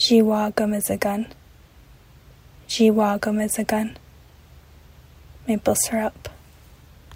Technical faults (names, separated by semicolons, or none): none